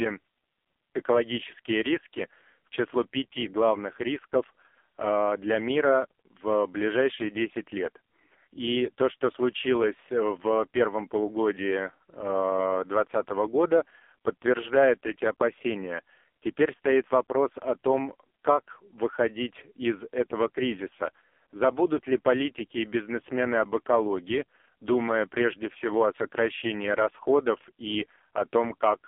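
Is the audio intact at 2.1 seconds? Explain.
No. At 2.1 s, as across the whole clip, AMR narrowband mobile codec damage is heavy: nothing above 3.5 kHz, a 250 Hz to 3.4 kHz line band, and buzzy synthetic speech suggesting the lowest 4.75 kbps mode.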